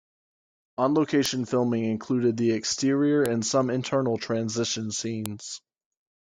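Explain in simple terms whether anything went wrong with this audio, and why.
Three sharp snaps cut through the speech at 1.26, 3.26 and 5.26 s, spaced 2 seconds apart: just before "filming included the exterior", just before "and some internal transition", and right after it. That's a file header played as audio: pieces were stitched together with their header bytes left in.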